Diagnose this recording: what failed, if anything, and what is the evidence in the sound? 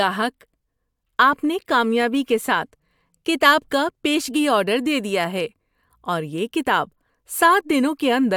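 Nothing failed; no fault is audible anywhere.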